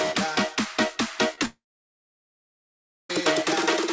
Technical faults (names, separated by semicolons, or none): short concealed packet loss; long network dropout